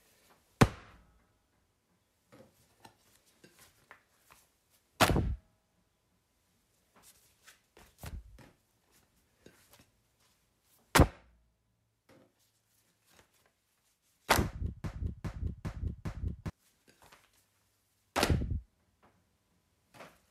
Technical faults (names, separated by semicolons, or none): broken-record loop